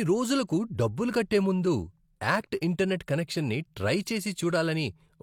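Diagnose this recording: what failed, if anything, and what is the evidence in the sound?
Codec stage: pre-echo at 2.61 s. A short hiss smears about 12 ms before a sharp speech attack. Block-spread quantisation noise leaks ahead of the onset.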